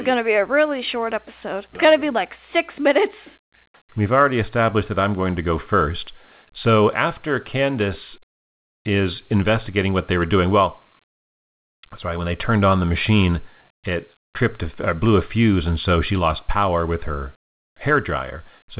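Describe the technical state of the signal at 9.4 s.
At 9.4 s the speech is intact, carried through the call path with its narrow telephone band that stops at 4 kHz, which fits a G.711 mu-law codec.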